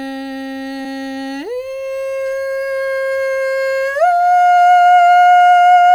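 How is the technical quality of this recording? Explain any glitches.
The recording has one audible glitch, a short concealed packet loss in the music from 0.83 to 0.87 s. About 20 ms of audio never arrived. The decoder extended the preceding sound for about 12 ms and then blended back, giving a brief smear or wobble. Unlike a plain dropout, there is no hard silence or click, just a momentary blur.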